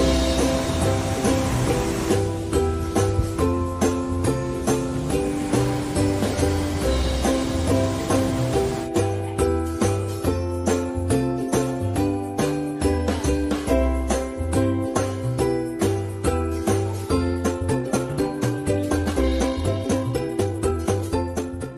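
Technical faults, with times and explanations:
17.32 to 21.78 s, time-stretched section: pace jumps to 1.75 times faster with pitch unchanged, sounding rushed, likely from dropping short pieces; a speed-up would raise pitch.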